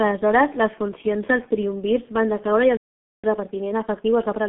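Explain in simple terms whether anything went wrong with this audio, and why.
The whole clip has gone through the G.723.1 codec, an old internet-phone speech coder. It keeps nothing above about 3.4 kHz and models the voice coarsely, so the speech sounds muffled and rough, and consonants lose their crispness.

At 2.77 s, right after "triumvirs van decaure i", the sound simply stops for about 0.46 s and resumes at 3.24 s. This playback stall was likely caused by the player running out of incoming audio and falling silent until enough arrived to continue.

From 3.24 s to the end, the player makes up for that lost time with time-compressed catch-up. It trims tiny slices out of the audio and blends the joins, so the speech runs about 1.15 times faster without any change in pitch.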